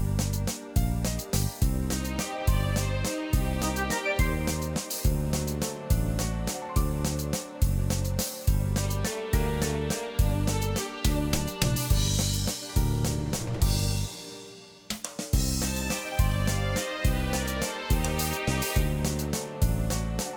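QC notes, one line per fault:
Nothing stood out on listening.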